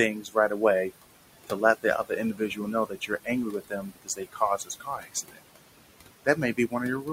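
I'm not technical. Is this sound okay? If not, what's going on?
No. Noise suppressor artifacts run through the whole clip. A noise-cleaning stage keeps guessing which parts of the sound are steady background noise and turns those parts down strongly, moment by moment. The room noise, which sits not far below the speech, therefore sinks in the pauses and comes back up under the talking.

Speech cut by the noise suppressor happens five times: 0.14 to 0.62 s, 2.34 to 3.29 s (right after "to let the other"), 3.51 to 4.41 s, 4.58 to 5.39 s, and 6.25 to 6.74 s. At each of these points the cleaning stage mistook softer bits of speech for background noise and pushed them down along with it. Quiet consonants and word endings come out faint or swallowed, most noticeably between 3.51 and 5.39 s.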